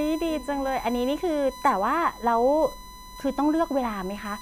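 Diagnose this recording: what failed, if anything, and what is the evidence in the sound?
A fixed-pitch 1 kHz whine sits under the speech throughout, roughly 20 dB down. This is USB whine: 1 ms bus-frame current leaking into the analogue power or ground wiring.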